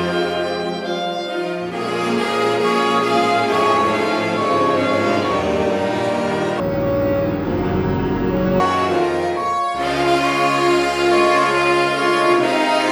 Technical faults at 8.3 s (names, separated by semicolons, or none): stereo read as mono